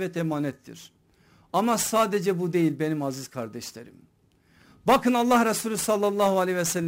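Speech marred throughout by sample clock jitter: timing wobble of around 10 microseconds rms adds a hissy roughness roughly 20 dB below the voice, strongest on loud, bright syllables and gone in pauses. A spectrogram shows broadband haze tracking each sibilant, vanishing between phrases.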